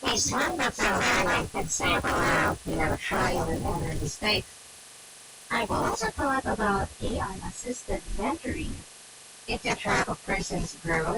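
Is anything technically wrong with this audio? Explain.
Yes. From 0 to 6.3 s the speech carries a resampler restarted on every block fault. Each 20 ms block was converted from 24 kHz to 48 kHz in isolation, leaving an edge error every block, heard as a 50 Hz buzz under the speech; a spectrogram shows vertical lines every 20 ms.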